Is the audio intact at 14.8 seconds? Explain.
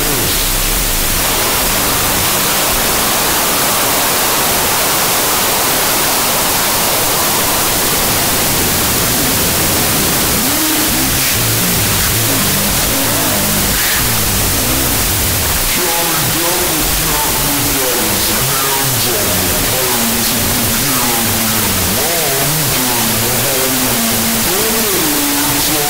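No. At 14.8 seconds the audio is corrupted by a wrong sample width, which runs through the whole clip. Each stored value has been split across two shorter ones, so most samples are built from mismatched bytes. Only some still carry the real signal's top bits. The result is loud, harsh noise with the original sound buried inside it. It plays at half speed, an octave low. This fits 32-bit float data read as 16-bit integers.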